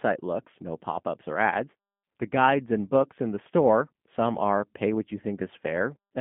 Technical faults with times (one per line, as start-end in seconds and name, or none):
0.00-6.21 G.729 codec